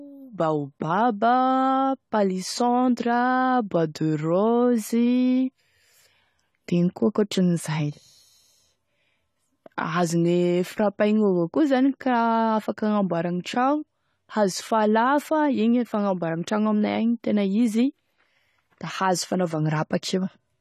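Speech runs through the whole recording with plainly audible AAC compression damage. Nothing reaches above 14 kHz, so the top of the spectrum is simply missing and the sound sits dull. Sibilants turn fizzy and sustained vowels warble. This is likely lossy AAC-LC coding. Too few bits were spread across each frame's frequency lines, so the coder dropped the highest band and coarsely quantised the rest. The damage fits a low bitrate, around 32 kbps.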